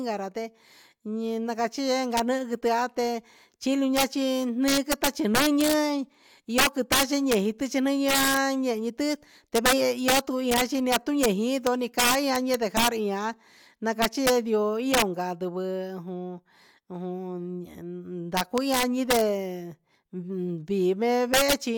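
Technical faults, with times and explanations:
Throughout, integer overflow: the speech is pushed about 8 dB past the integer limit, and instead of being held flat at full scale, the few peaks that cross it (under one percent of samples) wrap to the opposite sign, giving sharp, violent cracks rather than clipping's dull buzz.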